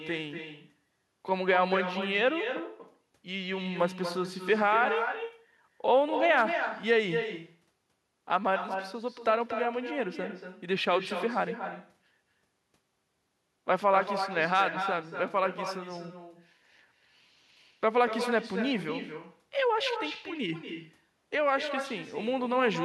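Echo with no canceller runs through the whole recording, from start to finish. The far end is evidently playing the call over a loudspeaker, and its microphone captures that playback and sends it straight back with nothing subtracting it. Every phrase of speech is trailed, roughly a fifth of a second later, by a second copy sitting about 8 dB below it, thinner than the original.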